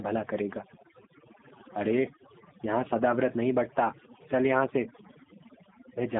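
Throughout, the background collapses to near silence with twinkling specks: overdone noise removal, with bands near the noise estimate pushed far down. Throughout as well, the speech is confined to roughly 150 Hz to 3.6 kHz, plainly rough and synthetic. This is the G.729 codec, in its G.729A form at a rate consistent with 8 kbit/s, rebuilding speech from a vocal tract filter and a few pulses.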